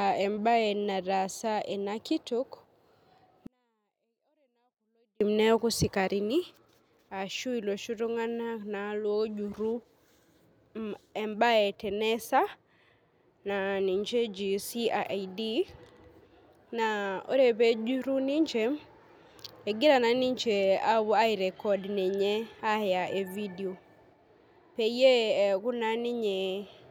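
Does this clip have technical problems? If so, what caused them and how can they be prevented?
Yes. From 3.47 s to 5.21 s the speech drops abruptly by about 48 dB, falling to a near-inaudible whisper while staying clean and undistorted, then snaps back to full level. This is a 24-bit alignment error (too quiet): 24-bit samples sitting in the low bytes of a 32-bit word were read as full 32-bit integers, so every value came out eight bits too small. Declaring and checking the sample container format at every interface prevents it.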